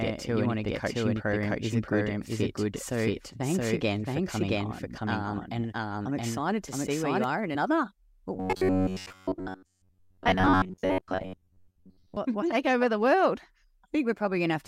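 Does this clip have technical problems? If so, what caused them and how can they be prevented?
Yes, three problems are audible.

The doubled audio track runs from the start to 7.24 s. A second full-band copy of the speech sits at roughly the same level, about 0.7 s behind, most likely because the same signal was captured a second time through a slower path. Unlike room echo or reverb, the copy has no decay and no room colour, and it cuts off abruptly at 7.24 s. To prevent it, make sure each source reaches the mix by only one route, muting any monitoring or loopback return.

At 7.54 s, compressed frames are skipped. About one 26.1 ms frame never plays, so the speech jumps ahead by roughly 30 ms, and there is no silent gap. To prevent it, check file integrity after transfer and use error-protected transport so the decoder receives every frame intact.

From 8.36 to 12.17 s, the speech takes on a robotic sound from repeated short buffers. 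Most of the audio there is replaced by loops of the last fragment, imposing a rigid 93.8 Hz buzz that fits a repeated chunk of about 10.7 ms. The likely cause is new audio arriving too seldom. Unlike a pitch-shift or vocoder effect, the buzz stays locked at one pitch while the speech only loosely survives underneath. To prevent it, enlarge the jitter or playback buffer and keep the audio thread from being starved.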